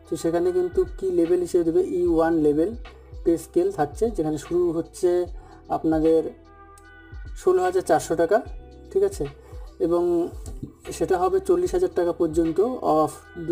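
Channel delay (comb filtering) runs through the whole clip. One channel arrives roughly 3 ms behind the other, and when the two are folded to mono the shared content partly cancels itself at a series of evenly spaced frequencies, starting around 200 Hz. Those fixed notches carve gaps through the low mids and up the spectrum, so the sound comes across hollow and phasey, with a thinned body from start to finish.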